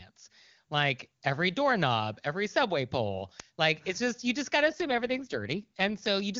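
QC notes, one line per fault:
4.62 to 6.08 s, AMR rate drop: the speech turns rough, raspy and synthetic for about 1.5 s, then clears as the rate recovers. The roughness fits the link forcing the wideband codec down from its top mode, near 23.85 kbit/s, to about 8.85 kbit/s, so fewer bits describe the pulse excitation. Unlike a narrowband fallback, the upper band stays present, and unlike packet loss, there is no gap or dropout.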